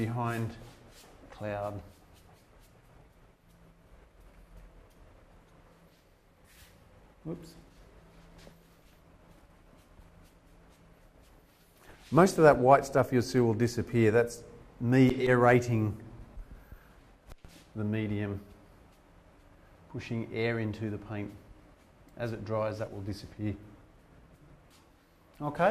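From 12.73 to 12.86 s there is DAB burbling: bit errors slipped past error correction into the MP2 data, putting noise blips into single sub-bands across what fits about five frames. Unlike a full-band dropout, it blips within narrow frequency bands.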